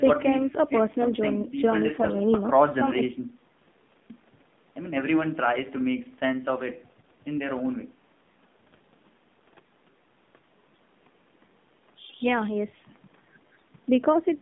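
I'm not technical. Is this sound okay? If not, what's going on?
No, it isn't quite okay. The whole clip has gone through the AMR narrowband mobile codec, the speech squeezer used on older 2G and 3G phone calls. It keeps only the middle of the voice, roughly 150 Hz up to about 3.6 kHz, and rebuilds speech from a rough model of the mouth and throat. That's why the voice sounds thin, boxy and a bit buzzy and synthetic all the way through, like a classic mobile call.

On top of that there are three short bursts of AMR bit errors, at about 1.96 to 2.34 s, 7.01 to 7.12 s and 12.10 to 12.21 s. The phone link was shaky, so some of the less important data got scrambled while the essential parts still arrived intact. During those moments the voice keeps roughly its pitch and loudness but turns hoarse, scratchy and gargly, as if the talker briefly had a rough throat.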